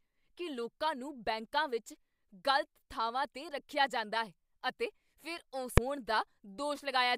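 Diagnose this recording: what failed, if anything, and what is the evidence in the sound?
Codec-level damaged data in a compressed stream: right after "ਜਾਂਦਾ ਹੈ ਅਤੇ ਫਿਰ", a brief blip at 5.78 s where corrupt bytes made the decoder lose sync and hunt for the next frame.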